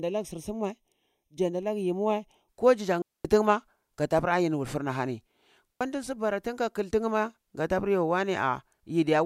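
From the start to about 2.49 s, just before "ko jijan", the speech has a hollow, phasey quality from channel delay (comb filtering). One channel trails the other by roughly a third of a millisecond, and summing them to mono cancels evenly spaced bands, with the first notch somewhere around 1.5 kHz.

Then there are two digital wireless dropouts. The first runs from 3.02 to 3.25 s, a 228 ms hole between "ko jijan" and "tin ma kata pur". The second is shorter, 77 ms from 5.73 to 5.81 s, just before "di su bara tin". Both times the receiver lost too much data and muted with a quick fade, so you get a clean gap of near silence with no noise burst on either side.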